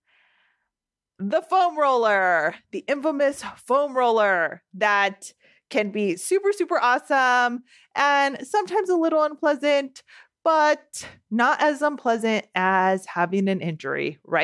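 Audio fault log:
No faults are audible anywhere in this speech recording.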